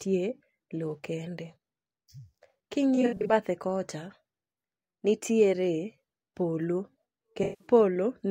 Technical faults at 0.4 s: none

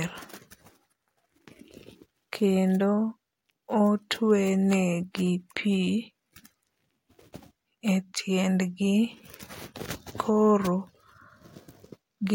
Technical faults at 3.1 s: none

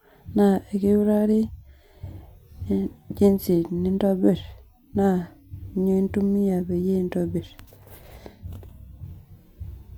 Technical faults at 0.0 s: none

